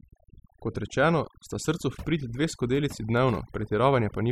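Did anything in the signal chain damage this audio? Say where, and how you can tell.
Yes, at the call processing stage: overdone noise removal throughout. Gaps sink to near silence with twinkling specks, and quiet parts of the speech are gated off along with the noise, unlike steady codec smearing.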